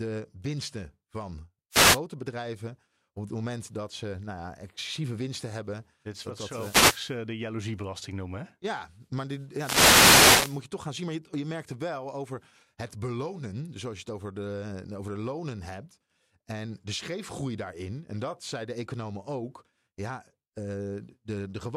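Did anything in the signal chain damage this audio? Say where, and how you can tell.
Yes. Wireless microphone noise hits in the analogue radio link: static bursts at 1.71–1.99 s, 6.44–7.17 s and 9.53–10.63 s. Reflections cancel the FM signal, so receiver noise rises.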